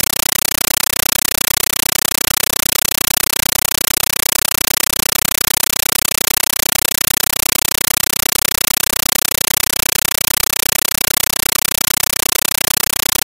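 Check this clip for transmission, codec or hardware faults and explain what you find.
One fault runs through the whole clip: a compressed stream played as audio. From start to finish, an AC-3 (Dolby Digital) bitstream is treated as ordinary samples instead of being decoded. Each frame becomes a burst of about 9.3 ms of noise followed by silent padding, repeating 31.25 times a second. The result is very loud, chattering static that completely replaces the speech.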